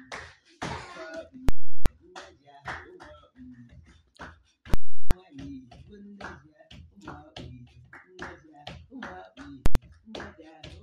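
Loud pops bracket dead gaps at 1.49 to 1.86 s and 4.74 to 5.11 s, with a single bang at 9.66 s. These are invalid numbers at full scale: a calculation produced infinite values, pinning the output at its limit for whole blocks of about 0.37 s and 93 ms.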